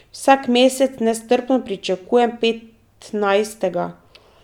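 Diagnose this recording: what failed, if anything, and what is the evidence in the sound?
Nothing failed; no fault is audible in this recording.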